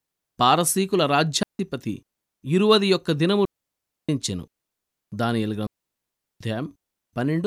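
Speech cut by three digital wireless dropouts, at 1.43 s (about 0.16 s), 3.45 s (about 0.64 s) and 5.67 s (about 0.74 s). Each time the receiver mutes cleanly with a fast fade, leaving near-silent gaps with no noise burst. These show as flat waveform holes and blank spectrogram columns.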